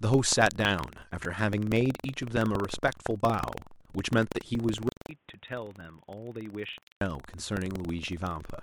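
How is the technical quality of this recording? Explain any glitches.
The recording has three faults: a persistent buzz, one brief jumble, and a stretch of duller sound.

Buffer tearing runs throughout. A 21.5 Hz rattle follows the speech, which fits a 2048-sample buffer replaying a small slice from about a fifth of a second earlier.

Chunks out of order occur from 1.23 to 1.25 s. A 5.8 ms chunk plays three chunks late. The result is a garbled instant.

From 4.89 to 7.01 s, the input was likely switched to a poorer device. The switch starts with 200 ms of silence. After it, the band narrows, the level drops about 10 dB, and new noise sits about 35 dB below the speech.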